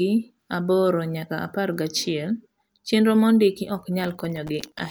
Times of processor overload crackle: 4.00-4.79

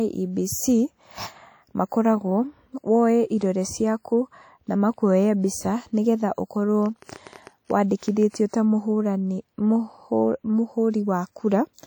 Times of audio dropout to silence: none

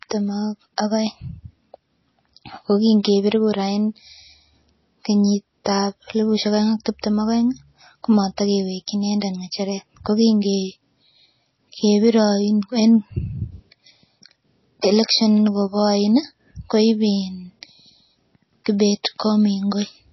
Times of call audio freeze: none

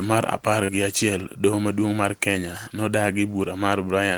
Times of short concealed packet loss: 0.64-0.69

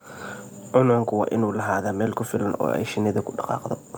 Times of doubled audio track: none

